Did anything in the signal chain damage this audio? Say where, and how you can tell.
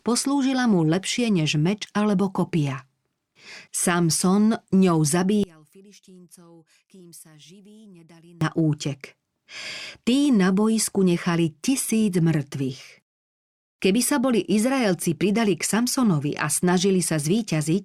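Yes. From 5.44 s to 8.41 s the speech falls by about 28 dB to a faint residue in mono. That fits one channel inverted, likely a reversed-polarity analogue lead: centred speech cancels when the channels sum, leaving only their small difference.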